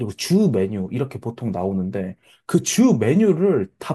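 No technical faults can be heard anywhere in the speech; the signal stays continuous and stable throughout.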